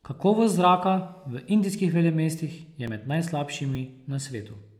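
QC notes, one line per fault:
1.79 s, 2.88 s, 3.75 s: dropped buffer (overrun), heard as three brief jumps in the speech where the sound skips forward by a few milliseconds to about ten. The likely cause is a capture program that fell behind, letting the hardware overwrite samples it had not yet read. The two sides join directly, so there is a jump in the sound with no silent gap, unlike a dropout. Speech continues at once after each jump.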